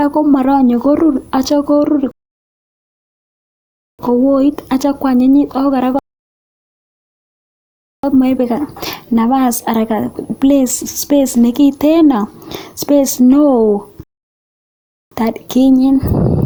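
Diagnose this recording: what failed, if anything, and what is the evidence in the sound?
Rebuffering stall at playback, three times: 2.11 to 3.99 s, 5.99 to 8.04 s, and 14.03 to 15.12 s. The speech drops to dead silence for about 1.9 s, 2.0 s and 1.1 s, then picks up exactly where it left off. Nothing is skipped or repeated. The player drained its buffer of downloaded audio and paused until more data arrived, so each stall adds time without removing any content.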